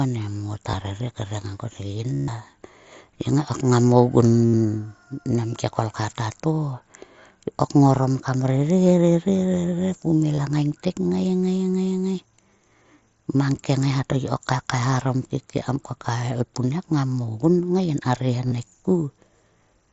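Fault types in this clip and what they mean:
Concealed Bluetooth headset packet loss: audio packets dropped out, and the phone filled each gap by looping a matching slice of recent waveform. Tiny gaps nearly vanish, but the 140 ms run at 2.14 s buzzes steadily, then warbles as speech returns.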